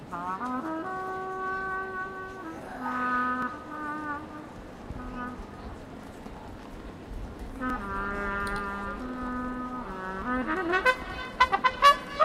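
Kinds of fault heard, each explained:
Dropped buffer (overrun): at 2.62, 3.42, 6.04 and 7.70 s the sound jumps straight ahead with no gap of silence, each time skipping a short stretch of roughly 10 to 30 ms, the longest near 6.04 s. The likely cause is the recording program failing to collect its samples before the hardware overwrote them, so that slice of audio is lost and the surrounding parts are spliced directly together.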